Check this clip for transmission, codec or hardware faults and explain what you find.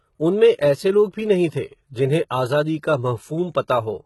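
One codec fault runs the whole way through: likely HE-AAC compression at a very low bitrate, around 16 kbps. The treble is a rebuilt copy of lower bands, so sibilants sound gritty and metallic, with nothing above 11.8 kHz.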